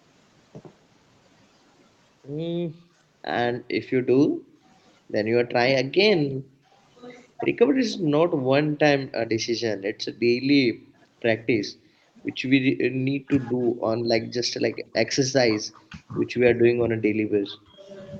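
The speech dips, thins and drops out in pieces from 2.6 to 4.67 s, 5.54 to 6.75 s and 7.67 to 17.8 s, sometimes falling by about 40 dB. This is likely speech suppressed in double talk: the echo canceller, unable to separate the talker from loudspeaker echo, turned both down.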